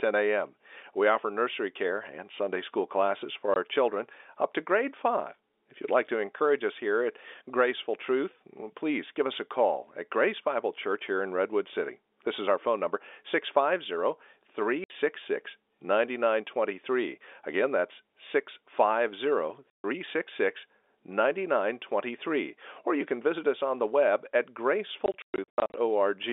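Packet loss filled with silence cuts the audio four times. At 3.54 s, between "school classes for" and "children up to grade", a 20 ms gap opens. A 60 ms hole follows at 14.84 s, and a 140 ms hole from 19.70 to 19.84 s. After "on the web at", gaps scatter from 25.06 to 25.74 s, the longest lasting 120 ms. Each hole's length fits a multiple of 20 ms, which points to 20 ms packets. The receiver put silence where they went missing, so the holes have hard edges. All of this sits over a narrow telephone band from the G.711 coding.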